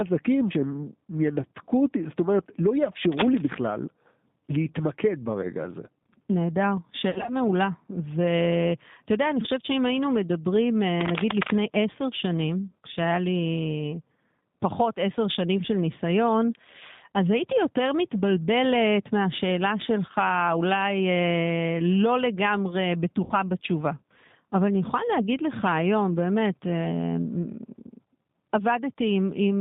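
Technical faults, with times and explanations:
Throughout, G.729 codec: the speech sounds band-limited and slightly rough, with a synthetic edge that is plainly audible. Nothing below about 150 Hz or above about 3.7 kHz comes through, so sibilants lose their sharpness and the voice sounds thin. This fits an 8 kbit/s G.729A stream, which does not store the waveform itself. It rebuilds each 10 ms frame from a vocal tract filter, a pitch predictor and a few pulses.
3.12–3.56 s and 11.01–11.51 s, cable scratch noise: dense, uneven scratching and rustling sits over the speech for about half a second each time. It is about 5 dB below the speech in the first burst and about as loud as the speech in the second. This is likely a worn cable, connector or control being moved. Its contact resistance changes rapidly and injects bursts of crackly noise into the signal.
7.10–7.31 s and 23.24–23.33 s, VoIP packet loss concealed by the speech codec: the speech smears into a buzzy, tonal or noisy sound that fades, then returns weak and distorted for a moment. 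The first event sounds like about 120 ms lost in gaps spread over 160 ms, the longest 60 ms. The second sounds like a single 60 ms gap. The decoder filled the gaps by repeating its last pitch and filter at falling gain. Each frame depends on the one before, so recovery lags behind the packets' return.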